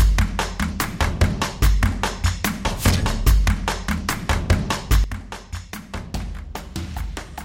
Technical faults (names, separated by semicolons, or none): sudden gain jump